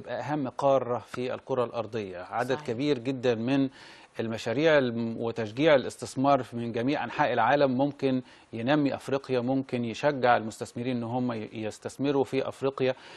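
No technical faults are audible.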